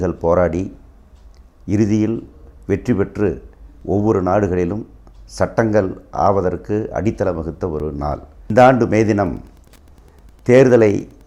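At 3.81 s and again at 7.80 s there is a tiny skip where a few milliseconds of sound drop out and the waveform jumps. This is an overlap between stream segments: two adjoining segments carry timestamps that overlap, so the player trims the supposed duplicate even though that sound was never actually repeated. The two skips fall almost exactly 4 s apart, matching the segment length. That spacing separates this from random dropouts or buffer underruns, which do not track segment boundaries.

From 9.21 s to the end, a faint steady ticking appears, roughly ten ticks a second and well below the main sound, around 40 dB down. This is Wi-Fi interference: a nearby Wi-Fi radio's beacon, sent every 102.4 ms, is picked up and rectified by the audio circuitry, turning each radio burst into an audible tick. The fixed rate of about 9.8 per second sets it apart from the segment-overlap skips, which are single events spaced seconds apart.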